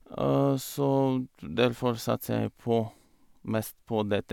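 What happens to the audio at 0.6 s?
Nothing goes wrong at 0.6 s; the speech there plays through intact, with no dropout, click or distortion.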